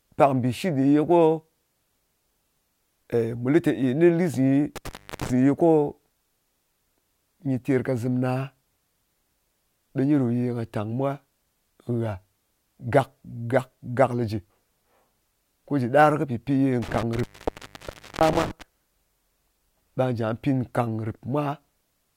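At 4.76 s the speech hits an intermittent contact: a loose plug or cable briefly opens, so the signal drops out for about 0.33 s, with crackle as the connection breaks and remakes, and faint hiss left while it's open. The whole disturbance runs to 5.30 s. It happens again, worse, from 16.82 to 18.62 s, where the line stays open for nearly a full second, about 0.97 s, with the same crackly edges.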